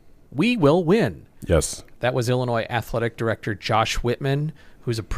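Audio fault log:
Nothing to log here: I listened all the way through and didn't hear a single glitch worth writing down.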